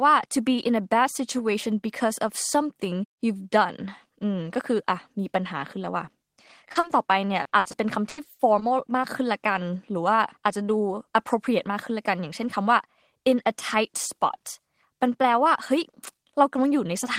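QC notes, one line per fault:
6.71–6.91 s, short concealed packet loss: three quick smears in the speech, at 6.71, 6.79 and 6.87 s, each a brief wobble before the sound settles again. In each case a short piece of the call arrived too late to be played. The holes were about 40, 40 and 20 ms long. The receiver covered each one by extending the sound that had just played, then blended back into the real audio.
7.43–8.63 s, repeated packet loss (robotic sound): this stretch turns choppy, with the speech breaking up and small pieces missing. Audio kept failing to arrive in time, and the holes came close together. Each hole was patched by continuing the last sound, and the next one followed before the speech could recover. The longest hole is about 80 ms, and together they add up to about 300 ms, roughly a quarter of the span.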